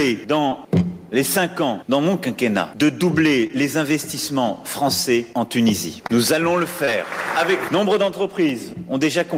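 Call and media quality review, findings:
Short concealed packet loss, four events: 0.49–0.53, 3.47–3.51, 6.07–6.11, 6.85–6.89 s. Brief smears or wobbles where roughly 20 ms of audio went missing. The receiver's jitter buffer and decoder concealment extended the preceding sound for 15–23 ms, then crossfaded back into the real audio.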